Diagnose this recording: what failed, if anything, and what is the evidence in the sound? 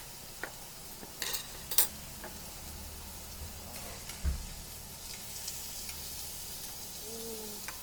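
The codec stage is the likely source of the first fault: Opus compression in its full-band music mode, at a rate that fits about 24 kbps. Throughout the clip, tones come out rough, grainy and noisy. Each band keeps its overall energy, but too few bits remain for the fine detail, so that detail is filled in with folded or noise-like content.

From 3.90 to 5.21 s there is channel delay (comb filtering) in the mono fold-down: one channel runs about a single sample late before the two are summed. With a delay that small, the first cancellation notch falls near 20 kHz. The sound dulls slightly at the very top rather than turning strongly hollow.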